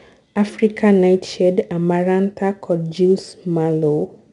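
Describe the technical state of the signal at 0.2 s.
At 0.2 s, as throughout the clip, 4-bit ADPCM compression codes each speech sample as a coarse adaptive step from a prediction, leaving plainly audible gritty hiss tracking the level, with nothing above 10.6 kHz.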